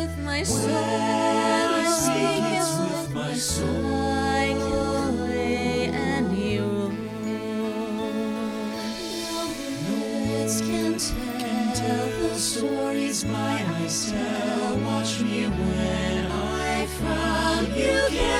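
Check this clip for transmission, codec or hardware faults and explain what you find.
Nothing to flag here, as the whole recording comes across with no dropouts, glitches or hardware trouble to point to.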